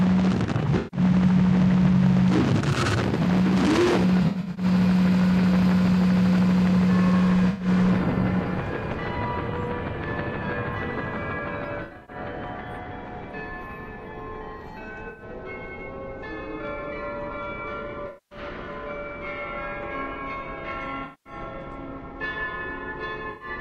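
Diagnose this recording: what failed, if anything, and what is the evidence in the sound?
The codec stage failed: AAC frame loss with concealment occurs eight times, at 0.77, 4.23, 7.50, 11.82, 15.09, 18.07, 21.04 and 23.30 s. Each loss lasts 85 to 235 ms, and those at 4.23 and 11.82 s are scattered across about 340 and 260 ms. The decoder fills each missing stretch from the last good spectrum, so the sound becomes a smeared, noisy or phasey patch until the real signal returns.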